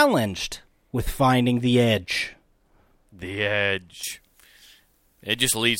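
At about 4.03 s, right through to the end of the clip, the speech suddenly goes thin and glassy. That's pre-emphasis left on: the treble was boosted on the way in, and the matching de-emphasis never got applied on playback. The top end sits about 13 dB hot at 10 kHz relative to 1 kHz, which fits the 75 µs FM curve. So you get sharp, spitty sibilance and a brittle, bright edge with no body underneath.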